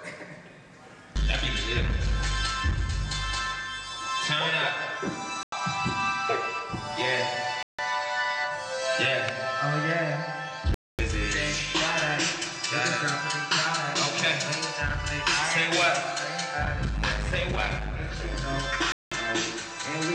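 A Bluetooth stall is the likely cause of four dropouts: delayed packets let the headphone buffer run dry, so playback halts until resent data arrives. The sound cuts to silence at 5.43 s for 92 ms, 7.63 s for 158 ms, 10.74 s for 245 ms and 18.92 s for 194 ms, then resumes.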